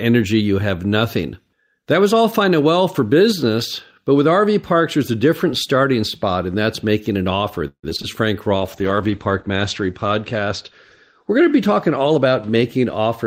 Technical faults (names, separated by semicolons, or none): repeated packet loss (robotic sound); call bitrate drop; jitter buffer speed-up